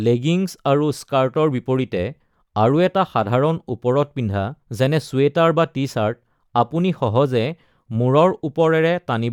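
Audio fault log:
No faults heard anywhere in this speech recording.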